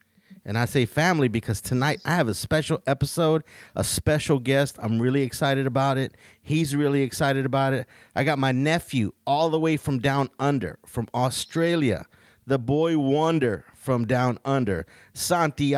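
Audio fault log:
No faults found: the speech runs its full duration with no dropouts, distortion or timing defects audible.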